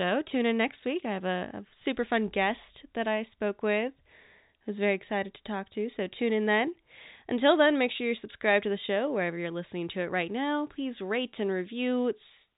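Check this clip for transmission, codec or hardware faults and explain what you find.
Nothing stood out on listening to this telephone-band speech; it sounds like ordinary G.711 coding, with the top cut off just below 4 kHz.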